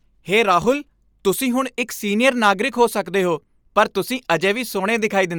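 Bluetooth LC3 compression runs throughout this speech clip: the speech carries a plainly audible breathy, grainy edge, with nothing above about 20.2 kHz, likely from LE Audio's transform codec at a bitrate that fits roughly 48 kbps with 10 ms frames.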